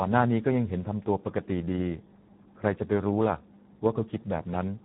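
From start to finish the speech carries heavy Speex codec damage: starved CELP excitation makes it hoarse and noisy, consistent with an 8 kbps mode. A spectrogram shows nothing above 3.9 kHz and smeared, grainy harmonics below.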